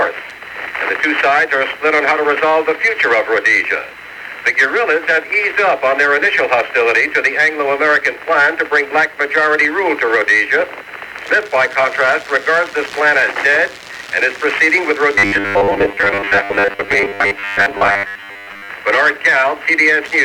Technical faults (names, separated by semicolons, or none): corrupt FLAC frame; robotic sound from repeated short buffers